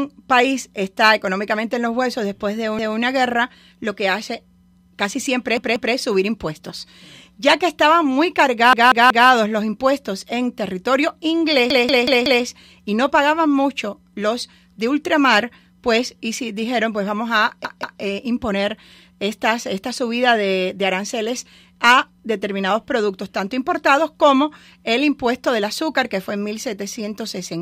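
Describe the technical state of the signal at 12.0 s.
At 12.0 s a stutter is under way: the same piece of speech about 0.19 s long plays again and again with a hard join each time, from 11.70 to 12.45 s. This is a repeated buffer. Fresh audio arrived late, so the last block, a length that fits an 8192-sample buffer, was replayed four extra times, and essentially nothing was lost.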